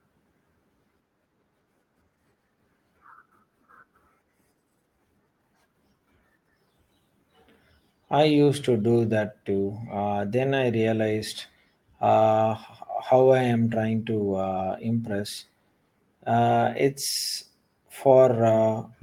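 No technical faults are audible.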